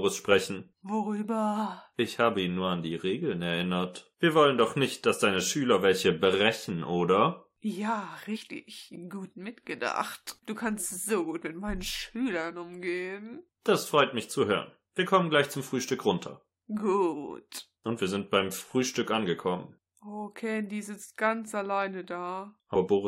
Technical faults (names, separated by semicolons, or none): compressed frames skipped